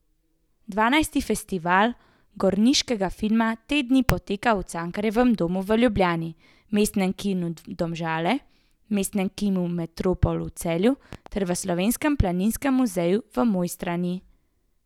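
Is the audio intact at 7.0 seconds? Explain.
Yes, at 7.0 seconds the audio is intact, with no audible fault at that moment.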